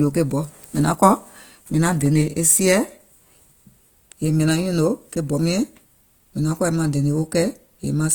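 A speech recording with a grainy, rough texture throughout, likely from Opus compression in its music mode at a low rate near 24 kbps, filling starved bands with noise while keeping full bandwidth. Two blocks of digital silence cut in abruptly: at 2.06 s, about 1.8 ms, between "naŋ kɔ̀ mìŋ naŋ" and "e sieɛ̀", and at 6.57 s, about 2.7 ms, between "yèè maŋ" and "kɔ̀ maŋ dènè", which fits an unfilled 128-sample output buffer.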